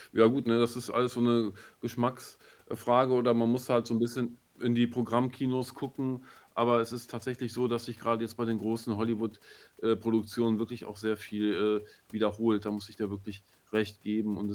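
Nothing goes wrong anywhere in this speech recording; it simply carries the light touch of Opus voice compression running in hybrid mode at 24 kbps, with the full band kept and content reaching up to about 20.2 kHz.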